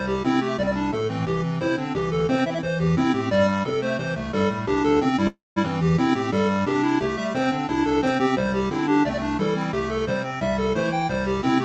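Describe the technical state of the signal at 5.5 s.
A call audio freeze spans 5.27 to 5.58 s, likely caused by delayed packets emptying the jitter buffer. The last sound carries on briefly, fades into about 0.18 s of silence, then resumes where it stopped, with nothing lost and about 0.29 s of added delay. The speech-tuned noise suppressor is also active here. It treats steady sound and tails as noise, so the level pumps by around 5 dB.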